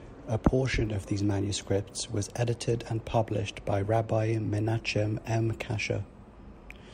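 Nothing in the signal points to a technical fault at any moment in the recording.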